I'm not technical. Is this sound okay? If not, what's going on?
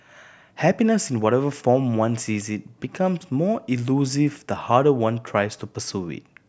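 Yes, nothing wrong can be heard in this recording.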